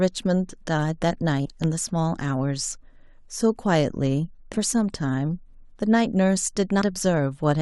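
At 1.45 to 1.52 s, compressed frames are skipped: roughly 70 ms of speech vanishes, consistent with dropped 20 ms frames. At 1.64 to 1.66 s a single loud pop, about 10 dB above the speech, likely comes from a voltage spike. Unlike a skip, the speech carries on unbroken beneath the pop. Further frame skips jump ahead about a fifth of a second at 4.53 to 4.57 s and about a tenth of a second at 6.81 s.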